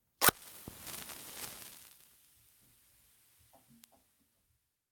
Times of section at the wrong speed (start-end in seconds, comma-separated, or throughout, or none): none